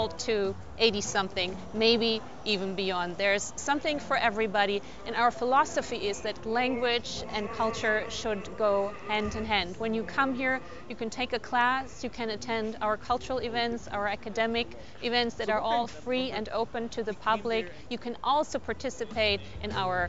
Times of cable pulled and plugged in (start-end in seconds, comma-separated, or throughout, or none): none